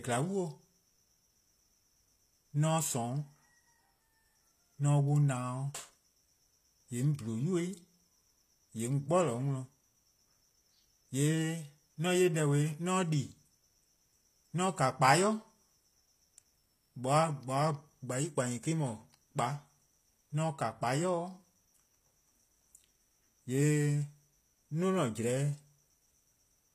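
From start to finish, the speech carries plainly audible HE-AAC compression. The treble sounds synthetic: upper bands are rebuilt from copied lower ones, so s sounds turn gritty and lispy. Nothing reaches above 14.9 kHz. This likely reflects a bitrate near 24 kbps.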